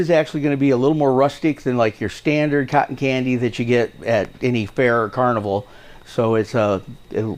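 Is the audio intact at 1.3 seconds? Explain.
Yes, at 1.3 s the audio plays straight through with no dropout, click, distortion or other fault.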